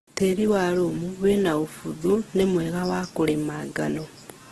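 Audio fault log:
Throughout: likely Opus compression at a rate near 12 kbps, making speech grainy and rough. The spectrogram shows noise-filled bands and a hard ceiling at 12.1 kHz.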